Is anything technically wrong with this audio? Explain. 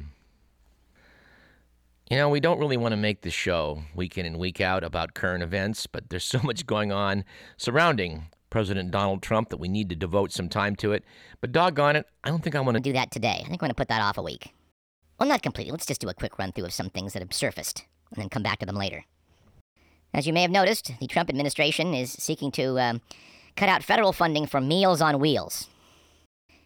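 Yes. From 12.78 s, right after "think I want to", through to the end, a section at the wrong speed plays 1.29 times too fast, likely from resampling against a mismatched clock. Pitch rises by about four semitones and the pacing hurries. Because tempo and pitch jump together, this is a speed error rather than a pitch shift.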